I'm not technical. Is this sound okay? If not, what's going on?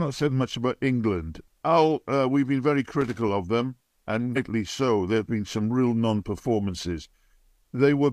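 No. At 3.01 to 3.28 s, right after "uh we've been very", there's loose connector crackle: a worn or dirty plug or cable contact kept connecting and disconnecting, chopping the audio into a brief burst of scratchy crackling before "of them".

At 4.32 to 4.37 s, just after "of them", there's damaged data in a compressed stream: a small piece of the audio file got corrupted, so the player briefly lost its place, causing a short glitch.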